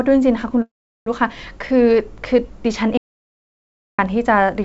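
A call audio freeze runs from 0.62 to 1.08 s. The speech halts, its last sound smears into a short fading buzz and then about 380 ms of near-silence, before the speech picks up exactly where it stopped. Delayed packets likely emptied the jitter buffer, inserting about 0.44 s of filler without losing anything.

An audio dropout to silence follows from 2.97 to 3.99 s. The speech cuts off mid-flow into dead silence with no room tone, then cuts back in. The input was likely lost, so roughly a second of speech is gone. Throughout, the band stops at 8 kHz, which fits a G.722 wideband call.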